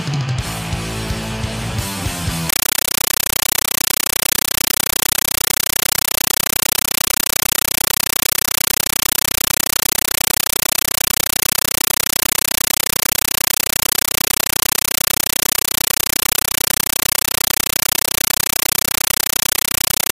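From 2.49 s to the end, the audio is replaced by harsh, very loud chattering static. This is a compressed stream played as audio. A Dolby Digital (AC-3) bitstream is being treated as plain samples instead of being decoded. Each frame arrives as a noise burst of about 9.33 ms, then silence from zero padding. The bursts repeat 31.25 times a second, which gives the rattling texture. The burst density points to a 448 kbps stream.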